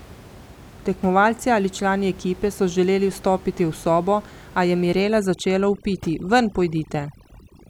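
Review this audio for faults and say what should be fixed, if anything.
Overdone noise removal sets in at 5.03 s and runs to the end. The background drops and breaks up into twinkling specks, as quiet parts of the voice are cut along with the room noise, which sits about 22 dB below the speech. Keep reduction strength moderate and leave some residual noise.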